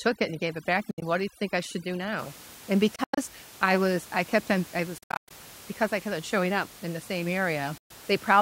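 From the start to about 2.19 s the speech carries overdone noise removal. The suppressor pushed individual frequency bands far down whenever they sat near its noise estimate, taking quiet parts of the speech with them. The background drops and breaks up into twinkling specks. On a spectrogram the gaps between syllables look scrubbed dark, dotted with isolated bright flecks, and the edges of the speech look ragged.

Four gaps then cut into the audio, each likely a Bluetooth dropout, where packets missed their deadline and the output went silent. The first runs from 0.91 to 1.02 s, within the noise-removal stretch, with about 80 ms missing in broken pieces, the longest about 67 ms. The others fall at 2.96 to 3.18 s (about 147 ms lost, longest run about 93 ms), 4.98 to 5.31 s (about 253 ms lost, longest about 107 ms) and 7.78 to 7.91 s (about 120 ms lost). The sound resumes further on, as though it had kept playing. 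A waveform shows flat-line holes with abrupt or briefly faded edges, and a spectrogram shows blank vertical bands across all frequencies. Outside the noise-removal stretch, room noise sits about 21 dB below the speech.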